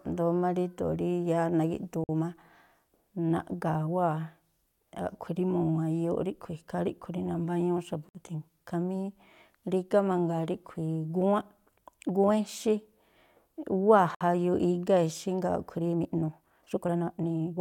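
At 2.04 s the speech drops out for about 50 ms, then picks up right where it left off. It happens again at 8.09 s and 14.15 s, each about 59 ms, a steady six seconds apart. That's a gap at a join of encoded pieces: the speech was encoded in six-second chunks and stitched back together without trimming, so each chunk's encoder start-up delay and end-of-frame padding survive as little holes with smeared edges.

From 15.76 s to the end at 17.61 s the pace suddenly jumps to about 1.6 times normal while the pitch stays put, so the delivery turns rushed. That's most likely a time-stretched section, where software squeezed the tail to fit a length by dropping short slices of audio rather than resampling. The missing slices give it that hurried feel.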